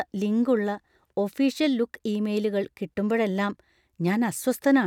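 A short speech recording, with no technical fault anywhere in it. Nothing in the sound calls for a time, a cause or a fix.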